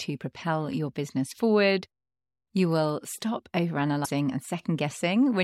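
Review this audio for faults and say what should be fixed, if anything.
Damaged data in a compressed stream breaks the speech from 4.01 to 4.11 s, just after "will stop". The decoder loses frame sync there and searches for the next frame header. Prevent it by verifying stream integrity with checksums and retransmitting or re-encoding corrupted segments.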